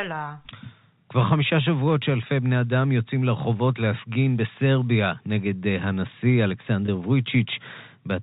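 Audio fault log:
6.86–6.88 s, packet loss with pitch repetition: a 20 ms gap, which fits one lost packet, is bridged by repeating the last pitch period, heard as a brief buzzy hold.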